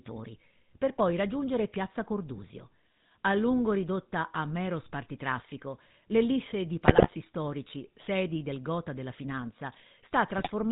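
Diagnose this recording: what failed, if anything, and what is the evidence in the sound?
The codec stage failed throughout: this is speech passed through the GSM full-rate codec, with plainly audible damage. The whole clip has a buzzy, gravelly roughness, consistent with a 13 kbps full-rate coder that models the vocal tract and rebuilds the excitation from sparse, regularly spaced pulses. On a spectrogram, energy stops hard at 4 kHz, and the harmonics look smeared and grainy rather than cleanly striated.

The network radio link failed at two points, producing GSM bit errors. From 6.85 to 7.1 s, between "mero spartitraffico l'ellisse di" and "storici sedi del gota", and again from 10.38 to 10.51 s, the speech breaks into squawks, pops and gargling. Corrupted filter, pitch and gain parameters distorted the decoded frames. On a spectrogram they appear as blocky, frame-length patches of misplaced energy.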